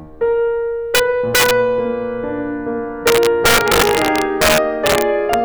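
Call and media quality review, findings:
Integer overflow on music peaks, 0.95–1.00 s, 1.35–1.51 s, 3.07–5.34 s (overdrive about 2, 6, 4 dB). Unclamped gain or mix sum wraps loud samples to opposite sign. Violent cracks, not flattened tops: much harsher than clipping.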